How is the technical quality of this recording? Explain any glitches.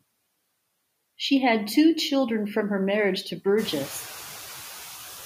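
The recording has one fault, noise suppressor artifacts, present throughout the speech. The suppressor treats the steady background as noise and pulls those bands down frame by frame, by about 10 dB, so the background dips in the gaps between words and comes back up underneath them. That pumping is clearest once the room noise climbs by about 15 dB at around three and a half seconds, though it still sits about 16 dB below the speech.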